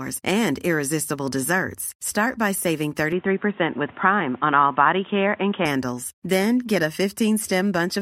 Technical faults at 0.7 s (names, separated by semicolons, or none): none